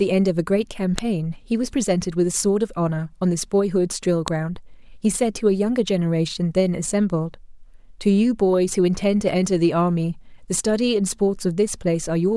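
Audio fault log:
0.98 s and 4.28 s: file header played as audio. Two sharp, loud snaps, each about a millisecond long, mark the start of a new joined piece of the speech. The few dozen bytes of a WAV header were read as samples, so arbitrary values make the waveform jump abruptly. Unlike a splice click or dropout, the snap's loudness ignores the speech level.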